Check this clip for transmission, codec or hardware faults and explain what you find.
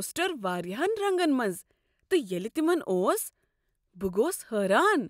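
No technical fault can be heard anywhere in the speech, and the signal stays continuous and steady throughout.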